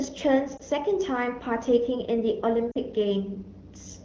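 A brief dip or warble at 0.57 to 0.61 s, then a slightly longer drop to near silence at 2.71 to 2.78 s, are lost AMR speech frames. Radio errors corrupted the frames, so the AMR-WB decoder filled the gaps by repeating the last good pitch and vocal tract settings at reduced gain. The first gap is 20 ms, which fits a single lost frame. The second is 40 ms, which fits two in a row.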